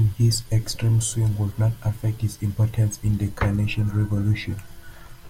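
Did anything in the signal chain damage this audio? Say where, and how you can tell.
No, the signal chain is undamaged.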